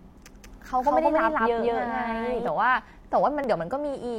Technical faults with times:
0.44-2.48 doubled audio track
3.44-3.47 overlap between stream segments

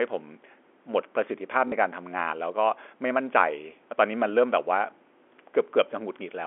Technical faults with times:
1.68-1.72 packet loss with last packet repeated

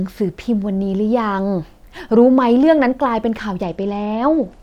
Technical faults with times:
3.63-4.63 Bluetooth SBC bit pool drop

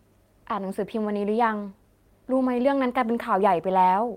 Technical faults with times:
none

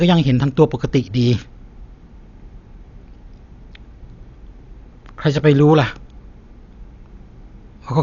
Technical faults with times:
0.00-8.02 Dolby Digital compression

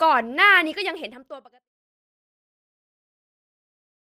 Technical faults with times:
none

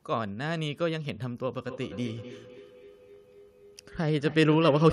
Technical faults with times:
1.64-4.92 feedback echo between two devices

